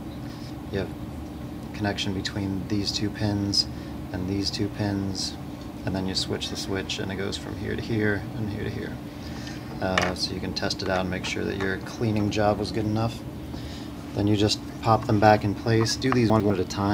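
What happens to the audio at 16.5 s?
A brief jumbled stretch ends there: from 16.3 to 16.5 s, chunks out of order swap two adjacent 100 ms pieces, the first arriving one chunk late and playing after its successor. Nothing is missing, but the reversed sequence creates three abrupt joins.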